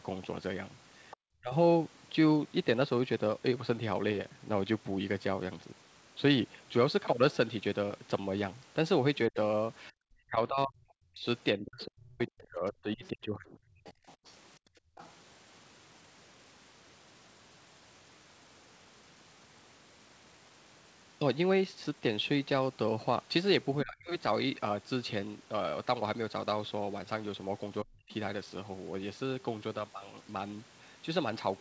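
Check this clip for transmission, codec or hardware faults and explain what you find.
The faults here are echo-control problems on a speakerphone-style call. The audio is band-limited with nothing above 8 kHz, as a wideband call codec produces.

Other side's voice leaking through, at 1.11 to 1.17 s and again from 11.24 to 15.12 s: the echo canceller likely failed to fully remove the far-end loudspeaker signal from the microphone. A faint second voice sits underneath, about 20 to 25 dB below the talker, as a brief scrap and then a longer stretch.

Speech suppressed in double talk, at 1.4 to 1.53 s, 9.29 to 13.99 s, 23.83 to 24.11 s and 27.83 to 28.11 s: with both sides talking, the canceller likely could not separate near speech from echo and attenuated everything. The talker dips by roughly 30 to 40 dB, chopping out for several seconds in total around 9 to 14 s.

Background gated by the echo canceller, from 14.59 to 14.97 s: while the loudspeaker played, the canceller clamped the microphone hard. 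The room sound drops by about 33 dB for around 0.4 s, then returns as the suppression releases.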